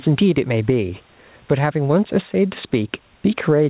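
Gain pumping runs throughout the speech, with the gain swinging roughly 10 dB; the room noise sits about 45 dB below the speech. The likely cause is input gain set far too high, with a fast limiter clamping each peak.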